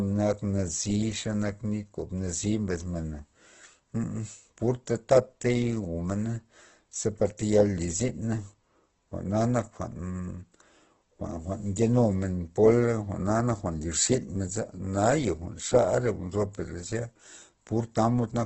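Speech with heavy Opus compression throughout. Nothing sounds above 8.1 kHz. The sound is grainy and rough, likely from a very low bitrate near 12 kbps.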